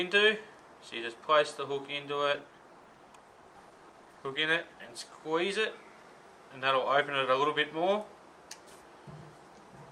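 From 2.34 to 5.01 s, a call bitrate drop turns the sound muffled and watery, consistent with a fall from about 96 to 16 kbps; the spectrogram shows high frequencies abruptly cut off.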